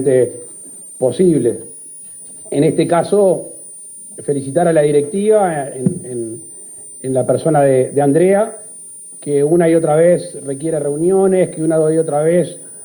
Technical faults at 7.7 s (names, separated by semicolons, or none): switching supply whistle